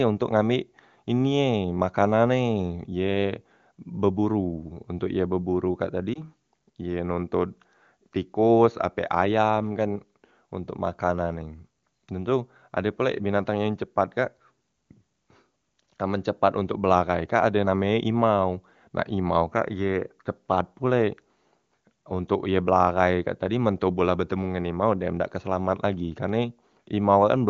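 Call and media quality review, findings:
Lost AMR speech frames, 6.14–6.23 s: brief dip or warble, fitting one lost 20 ms frame on the radio link. Decoder repeats last pitch and vocal-tract settings at lowered gain. Differs from a hard dropout: no silence, voice briefly weak or rough after, wideband HD Voice detail otherwise intact.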